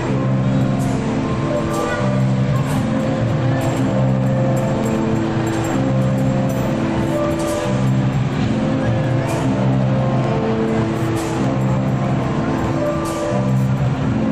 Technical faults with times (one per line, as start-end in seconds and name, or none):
0.64-13.85 clock drift buffer slips